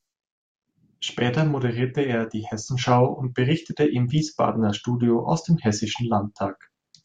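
No technical faults can be heard anywhere in the recording.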